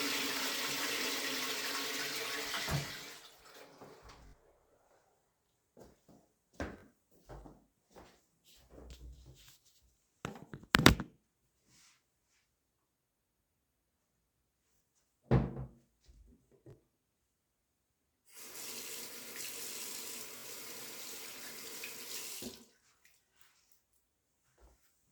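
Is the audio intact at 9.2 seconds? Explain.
Yes, the audio is intact at 9.2 seconds, with no dropout, click, distortion or other technical fault audible at that moment.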